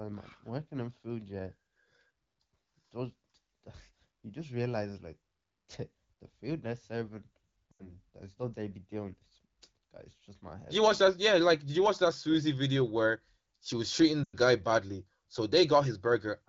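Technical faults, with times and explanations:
7.72–7.95 s, lost AMR speech frames: after "the food they're serving", about 80 ms of audio is concealed. The decoder repeats the last good pitch and vocal-tract settings at falling gain, so the sound smears and dips before "it's not they be" returns roughly. On a spectrogram the harmonics freeze into flat horizontal bands that fade, and the waveform envelope sags.
14.23–14.36 s, lost AMR speech frames: after "where she was treating", about 100 ms is lost, which fits five 20 ms frames. The held, decaying excitation drops to near silence within two frames, and the signal comes back weak at "guy badly". The spectrogram shows a smeared, dimming patch, and the waveform shows a tapering gap.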